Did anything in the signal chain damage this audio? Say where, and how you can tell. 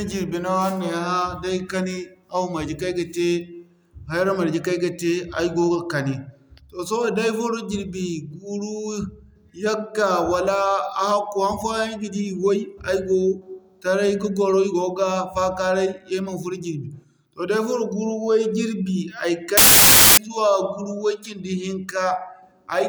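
Yes. At the sample-format conversion stage, from 19.57 to 20.17 s, there is a wrong sample width fault. Harsh, loud noise swamps the speech, with the original just audible underneath, slowed to half speed and an octave low. That fits 32-bit samples being read as 16-bit: each true sample splits into two, doubling the count and halving playback speed, while the low-order halves become garbage and only the high-order halves carry the top bits of the real signal.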